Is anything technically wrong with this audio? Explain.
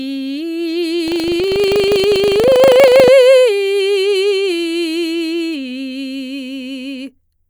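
Yes. From 1.04 to 3.11 s the music shows buffer tearing: the writing program and the playback hardware have slipped so they cross inside each buffer, splicing in a small slice of audio about a tenth of a second stale, with hard joins either side, heard as a robotic 25 Hz rattle.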